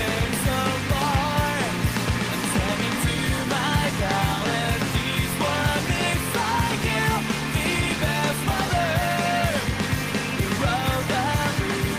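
No technical faults can be heard anywhere in this audio.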